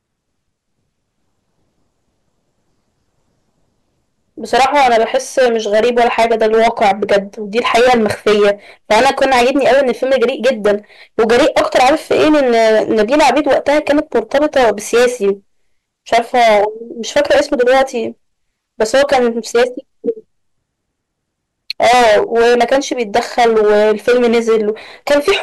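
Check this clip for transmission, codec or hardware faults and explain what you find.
Hard clipping runs through the whole speech clip. The signal is overdriven by about 19 dB and roughly a sixth of samples hit the ceiling, so peaks flatten into harsh fuzz. The waveform shows squared-off tops, and the spectrogram shows harmonics smeared high.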